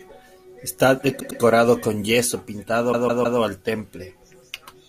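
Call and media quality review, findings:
Repeated frames, 1.19–1.40 s: one 104.5 ms block replayed twice more, stutter; 209 ms added. Encoder or storage writing the same compressed frames again.

Repeated frames, 2.91–3.38 s: 156.7 ms block played three extra times, 470 ms added. Same mechanism. Unlike concealment after packet loss, each replay is an identical copy of real audio with no fade, and the clip's length grows by the repeated time.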